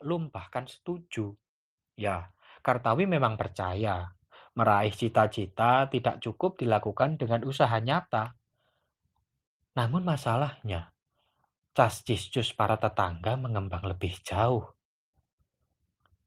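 From 1.96 s to 4.15 s, the speech and the background noise swell together, climbing about 5 dB over roughly two seconds. This is automatic gain rising: the automatic gain control judged the input too quiet and raised its gain gradually.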